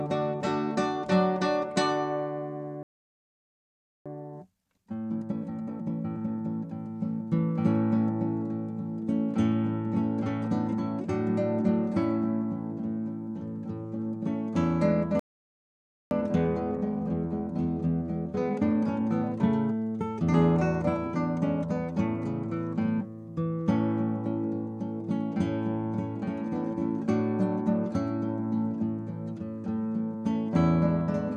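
Playback stall at 2.83 s: the sound cuts out mid-flow and stays silent for about 1.23 s, until 4.06 s. The player most likely ran out of buffered data or had its output thread held up, so nothing reached the output until it recovered. Time-compressed catch-up follows from 4.06 to 6.50 s. The player works off its backlog by trimming small slices and cross-fading across the joins, running at 1.5 times normal speed. The sound is audibly rushed but keeps its pitch.

A second playback stall hits at 15.19 s and lasts about 0.92 s, to 16.11 s, with the same silent break in the middle of the sound and the same likely starvation or blocking behind it. The catch-up after it, from 16.11 to 19.11 s, is gentler at 1.1 times speed. The hurrying is slight.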